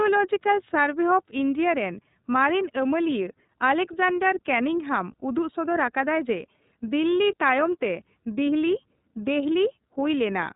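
iLBC codec damage runs throughout: each frame's excitation is coded independently, leaving plainly rough, synthetic speech, nothing above 3.8 kHz, consistent with 13.33 kbps, 30 ms frames.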